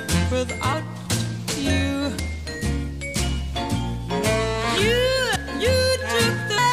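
At 0.72, 2.18, 5.34 and 6.57 s the audio jumps forward: compressed frames skipped. Whole frames, each 26.1 ms long, were either missing or rejected by the decoder as damaged, so playback resumes further ahead. The gaps grow through the clip, roughly 70 ms, 100 ms, 200 ms and 300 ms of lost material. Because adjacent frames overlap, each join sounds like a short smeared blip, not a sharp click.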